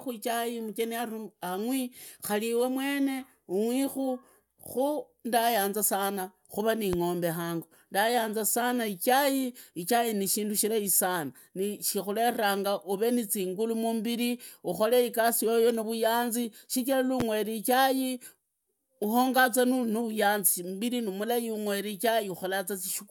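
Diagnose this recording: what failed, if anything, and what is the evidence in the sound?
Loud pop at 6.93–6.96 s and again at 17.20–17.23 s, each a single sharp pulse lasting about 30 ms, the first peaking about 10 dB above the speech and the second about 15 dB above it. The speech carries on unbroken beneath both, so nothing was lost. A brief voltage step was added on top of the audio, likely in the analogue wiring from a loose plug, a switch or a static discharge, and the following circuits shaped it into a thump.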